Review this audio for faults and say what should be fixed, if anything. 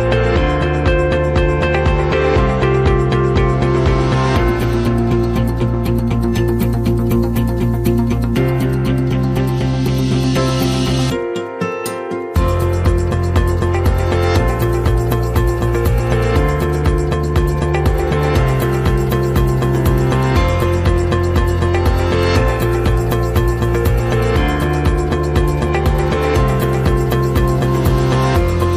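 Nothing to fix: no audible faults anywhere in the clip.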